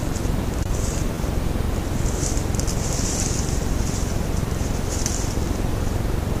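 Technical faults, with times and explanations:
0.63–0.71 s, short concealed packet loss: a brief smear where the sound seems to stretch and waver. Two consecutive 20 ms gaps never arrived in time, so the receiver extended the preceding audio with an invented continuation before blending back into the real signal.
1.15–1.19 s, short concealed packet loss: a single quick wobble. One 20 ms hole was filled the same way, so a very short sound there may be lost.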